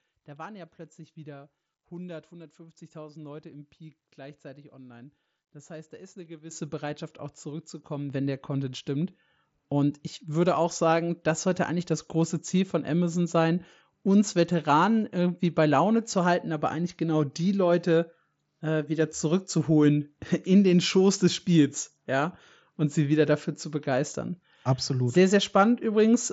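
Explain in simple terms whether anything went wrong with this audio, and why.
Something did go wrong: the microphone volume stepped up three times. The call software decided the microphone was too quiet and turned its input up in one sudden step. Voice and background jump louder together. The first and biggest jump comes at 6.51 s, right after "heißt da ist eine". A smaller one follows at 8.1 s, just before "wenn der". A slight one comes at 9.12 s. The Bluetooth headset link also limits the sound's top end.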